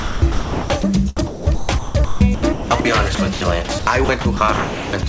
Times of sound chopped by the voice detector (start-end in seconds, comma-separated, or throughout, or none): 0.00-0.85, 1.17-5.03